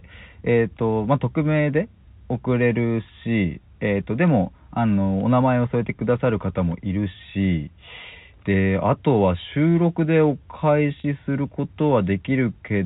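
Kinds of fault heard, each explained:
Packet loss with pitch repetition: Near 11.0 s, about 40 ms of the speech goes missing, a span that fits two 20 ms packets. The receiver fills the hole by replaying the last pitch period, so instead of a gap you hear the sound briefly held on one buzzy, steady pitch before normal speech resumes at 11.04 s. A plain dropout would leave silence or a click; this concealment leaves a short, frozen tone within the 4 kHz telephone band.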